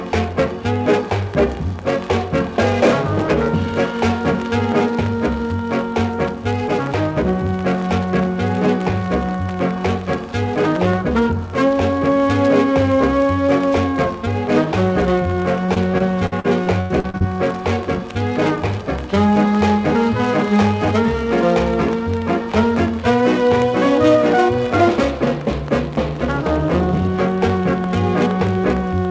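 Repeated packet loss (robotic sound) runs from 15.66 to 17.22 s. Audio packets went missing or arrived late in quick succession, about ten times in that stretch, with the longest hole near 93 ms. Each gap was patched by stretching out the sound just before it, so roughly a quarter of the span is filled-in guesswork. The result is choppy, with fragments dropping out. Throughout, nothing is heard above 8 kHz, which fits a wideband call codec such as G.722.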